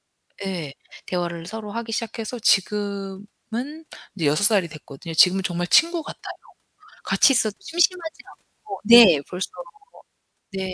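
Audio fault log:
2.01–7.22 s, wrong sample rate: speech slows to 0.92x speed and drops 1.47 semitones in pitch, which fits 24 kHz audio being played back at 22 kHz.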